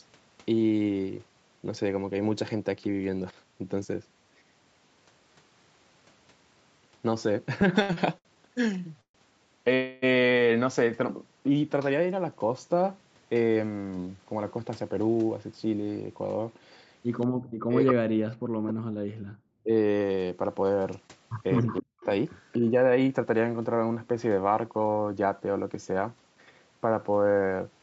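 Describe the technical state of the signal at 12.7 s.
At 12.7 s the speech is intact, with no dropout, glitch or distortion, only the ordinary band limit near 8 kHz and the usual coding texture from the call path.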